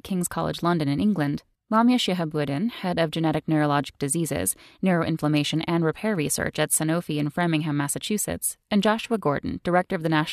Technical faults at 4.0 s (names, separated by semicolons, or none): none